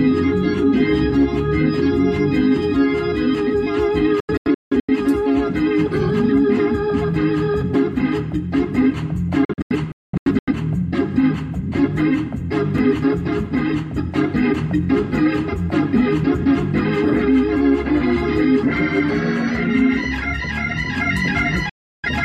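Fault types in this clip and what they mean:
digital broadcast dropout: The receiver loses the signal and mutes until clean data returns. Here it does so at 4.2 and 9.45 s in clusters of short holes (longest 0.21 s) and again at 21.69 s, with 3 ms fades. It shows as blank vertical gaps in the spectrogram and flat-line stretches in the waveform.
CD scratch ticks: A blemish destroys more data than error correction can rebuild, so the player patches or mutes a tiny span once per revolution. Three ticks under a millisecond fall between 12.61 and 12.96 s, appearing as thin broadband vertical lines in the spectrogram and tiny breaks in the waveform.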